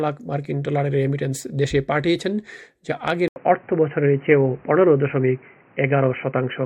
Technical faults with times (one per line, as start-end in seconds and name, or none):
1.99-2.16 DAB burbling
3.28-6.65 input switched to a poorer device